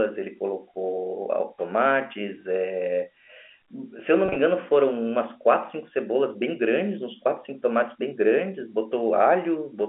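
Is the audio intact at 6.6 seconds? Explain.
Yes, at 6.6 s the speech is intact, with nothing breaking up the telephone-band sound at that point.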